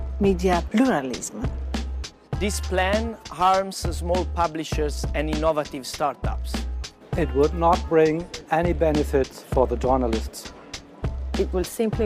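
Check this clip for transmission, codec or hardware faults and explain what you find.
No transmission, codec or hardware fault can be heard anywhere in the audio.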